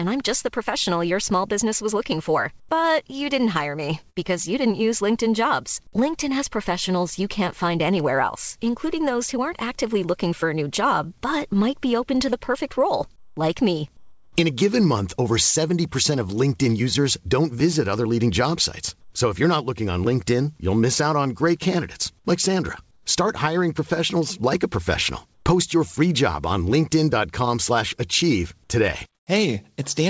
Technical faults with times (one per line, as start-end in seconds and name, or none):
2.60-2.69 comfort noise in place of the background
4.10-4.19 burst of packet loss
13.16-13.37 comfort noise in place of the background
13.97-14.36 comfort noise in place of the background
19.01-19.13 comfort noise in place of the background
22.91-23.06 comfort noise in place of the background
25.34-25.46 comfort noise in place of the background
29.15-29.27 comfort noise in place of the background